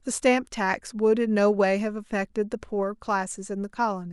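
No technical faults occur at any point in the speech, so there is nothing to describe in time order.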